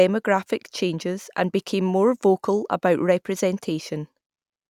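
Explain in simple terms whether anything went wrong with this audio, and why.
Nothing went wrong here: the speech carries no audible technical faults anywhere in the clip.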